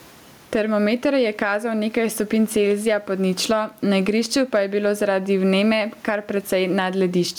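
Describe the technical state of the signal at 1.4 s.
Gain pumping is present at 1.4 s, as it is across the whole clip. The level moves by around 10 dB with the speech, and the room noise sits about 41 dB below the speech. The likely cause is input gain set too high with a fast limiter or compressor clamping every peak, which squashes loud and soft passages toward one level.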